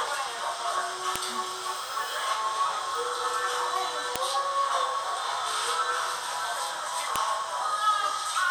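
Sharp clicks at 1.16, 4.16 and 7.16 s, spaced 3 s apart, are a file header played as audio: joined pieces kept their headers, and those bytes play back as a brief snap.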